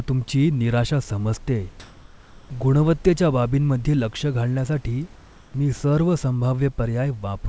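At 1.80 to 2.50 s, after "तुमची निराशा समजतेय", the sender likely stopped transmitting, so comfort noise in place of the background fills 0.7 s with flat, featureless hiss.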